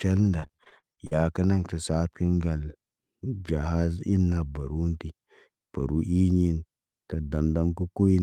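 From 0.39 to 1.13 s, just before "kə naŋg tə saad", repeated packet loss (robotic sound) chops the speech. Nine short holes, the longest 41 ms, are filled by repeating the preceding sound, giving a choppy sound. A spectrogram shows smeared, copied harmonic slices between brief gaps.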